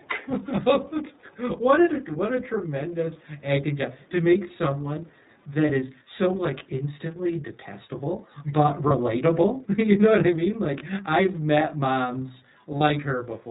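Speech throughout carries channel delay (comb filtering): one channel runs roughly 20 ms late, and the mono sum cuts evenly spaced notches from around 30 Hz upward, leaving the sound rough and slightly doubled. The iLBC codec damage is plainly audible across the whole clip: nothing passes above 4 kHz, and the voice sounds rough and synthetic, which fits the 13.33 kbps mode with 30 ms frames. Echo leak appears at 0.00–0.06, 3.21–3.42, 4.02–4.10 and 5.06–5.53 s as a faint copy of the voice trailing 432 ms behind, about 35 to 40 dB down, likely from a far-end loudspeaker whose echo canceller let some pickup return. Speech suppressed in double talk is heard at 0.00–0.19, 8.41–8.53 and 9.51–10.05 s. The voice dips by about 10 dB at first, deeper at 8.4 s, and nearly vanishes around 9.5–10.0 s, likely because the echo canceller turned down its own talker along with the loudspeaker echo while the two overlapped. 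Lost iLBC frames occur at 8.88–8.92 and 12.77–12.82 s: each gap of about 30 ms, consistent with a single dropped frame, sounds like a brief buzzy held vowel, and normal sound returns immediately.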